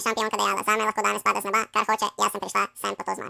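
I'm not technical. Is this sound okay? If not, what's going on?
No. This speech clip has a wrong sample rate fault from start to finish. The audio plays at exactly twice the speed it should, so the voice is rushed and sits a full octave higher, like a chipmunk. That fits a recording made at 16 kHz being played back as if it were 32 kHz. What sets it apart from a simple pitch change or a speed-up alone is that speed and pitch rise together by the same amount.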